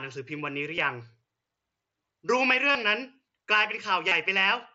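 A speech clip with concealed Bluetooth headset packet loss at 0.76 s, 2.72 to 2.75 s and 4.08 to 4.12 s. The first gap is brief. The later two sound like a short buzzy hold, then a slight warble. The receiver filled each gap by repeating recent waveform. The sound passes through the mSBC headset codec, with speech extending up to 8 kHz.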